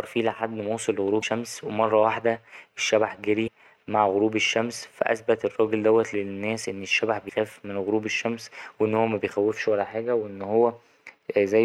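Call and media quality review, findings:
Damaged data in the compressed stream: corrupt frames at 1.19–1.24 s, 3.44–3.48 s and 7.25–7.30 s. Decoder misreads the bad bytes, loses frame sync and hunts for the next header. Each event is a brief chirp, squawk, click or short hole, about 45 ms, breaking the speech.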